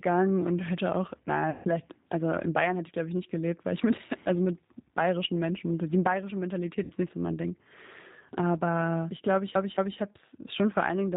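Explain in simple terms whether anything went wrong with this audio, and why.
G.729 codec, throughout the whole clip: the speech has been squeezed through a low-rate phone-call codec. Rather than sending the actual sound, it sends a rough recipe: the shape of the mouth and throat, the pitch, and a few pulses. The far end rebuilds the voice from that recipe. Everything above about 4 kHz is gone, so the speech is understandable but sounds muffled, slightly rough and a bit artificial.

VoIP packet loss concealed by the speech codec, at 1.50 to 1.67 s and 6.84 to 6.93 s: pieces of the call went missing on the network. The first gap comes right after "und hätte auch" and the second right after "die bayerische". The decoder filled each hole by stretching out the last sound it had, growing quieter as it went, so you hear a brief buzzy or noisy, fading smear. The first gap is longer, about 150 ms, and the second about 60 ms. 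The voice takes a moment to sound clean again before "also in" and "nicht so mein".

CD stuck on one turn, at 9.55 to 9.99 s: just after "ich glaube ich", a short slice of about 0.22 s plays repeatedly, with a tiny cut each time it jumps back, before the speech carries on with "habe es". That even, rapid stutter is the sound of a scratched CD throwing the laser back to the same spot on each rotation.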